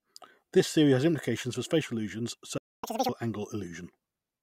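A speech recording, the clip has a playback stall at 2.58 s, right after "implications for spatial illusions": the output drops to silence for about 0.25 s, until 2.84 s, and the sound then resumes mid-flow. The gap is most likely the player running out of buffered data, or its audio thread being blocked, so nothing reached the output until it recovered. Immediately afterward comes catch-up at higher speed, from 2.84 s to 3.09 s. The player works through its backlog by resampling at 2.0 times normal rate, so the audio is both faster and higher in pitch, by around ten semitones, giving a brief chipmunk-like quality. Doubling the rate for roughly a quarter second wins back the time lost in the stall, after which speed and pitch return to normal.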